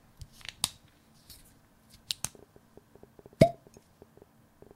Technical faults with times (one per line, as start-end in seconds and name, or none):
2.35-4.72 train of clicks